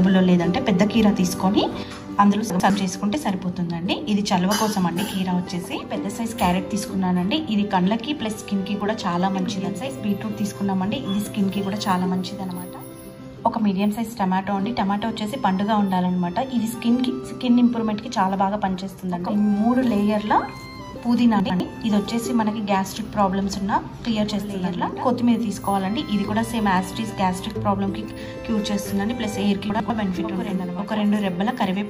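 A channel dropout begins at 1.83 s and lasts to the end: the level falls abruptly by about 6 dB and stays down, with any content that lived on only one side vanishing. This is likely one stereo channel going silent before the mono sum, so material common to both channels is left at half its amplitude while anything exclusive to the dead side disappears completely.

Chunks out of order occur at 2.5 to 2.7 s, 21.4 to 21.6 s and 29.7 to 29.9 s. Each time, a 100 ms block of audio plays one chunk late, after the block that should follow it, so two short pieces swap places. Nothing is missing, but the reordering leaves hard joins and a brief jumbled moment where the sound jumps forward and then back.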